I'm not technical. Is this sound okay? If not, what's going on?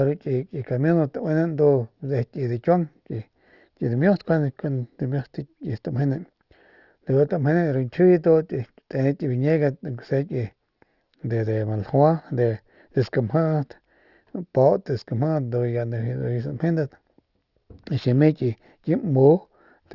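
No, it has a fault called aliasing, running through the whole clip. The sound was squeezed to a lower sample rate, likely around 12 kHz, without first trimming the high sounds. Everything above about 6 kHz folds back down as faint, wrong tones, so hissy sounds come out gritty and metallic.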